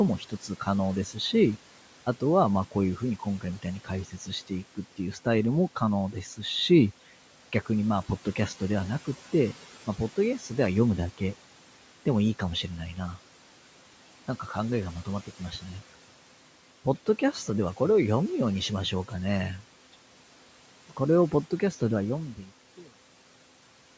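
Between 0.19 and 0.67 s, and again from 4.05 to 4.28 s, the noise suppressor cuts into the speech, mistaking quiet speech detail for background noise. Short stretches, together about 150 ms the first time and 100 ms the second, are pulled down by about 11 dB and then about 10 dB, so soft consonants and word tails sound swallowed. Unlike a dropout, the sound never vanishes or clicks. It just thins briefly, with the background dipping along with it.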